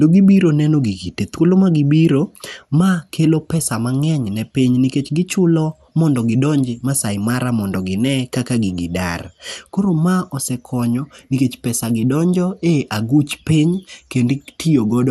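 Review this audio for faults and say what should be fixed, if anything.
MP2 compression, throughout the clip: the speech sounds dull and gurgling, with granular distortion and nothing above 15 kHz. Likely cause: MPEG Layer II coding with too few bits, which switches off upper sub-bands and coarsely quantises the rest. This fits a rate near 80 kbps.

Encode at a higher bitrate or with a more efficient codec to prevent it.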